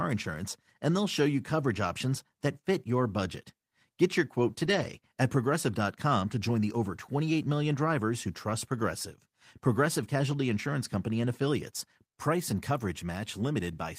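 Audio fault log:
4.63 to 4.89 s, lost packet rebuilt from error correction: right after "your quote" the speech goes briefly rough and grainy, a bit noisier than around it, yet nothing drops out. Packets went missing here, but each following packet carried a low-bitrate backup copy, and the decoder played those copies to fill the hole. That covers about 140 ms of patched audio, which fits roughly seven 20 ms packets, so it's smeared rather than silent.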